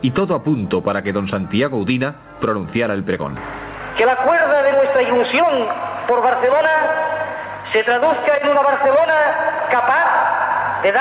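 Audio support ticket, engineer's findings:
Gain pumping, throughout the clip: swing around 15 dB; levels squashed together. Likely cause: input gain far too high, with a fast limiter/compressor clamping every peak. Call path bandwidth stops at 4 kHz, consistent with G.711 mu-law at 64 kbps.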